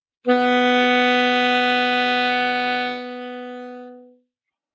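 A speech-oriented noise suppressor stays active throughout, treating steady parts of these sounds as noise, so levels pump by roughly 10 dB while attacks pass and sustained portions sink. From 2.84 to 4.22 s, sound cut by the noise suppressor: the suppressor judges this stretch to be noise and pulls it down by up to about 10 dB, so the held and fading material thins and its decay is clipped short. The call microphone processing leaves nothing above 8 kHz.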